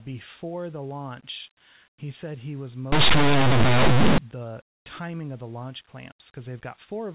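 Between 2.92 and 4.18 s, the speech recording's plain linear 8-bit samples are decoded as mu-law codes. This is linear audio read as companded, so values just to one side of zero expand to the largest outputs while the rest stay small. The passage becomes loud, harsh distortion.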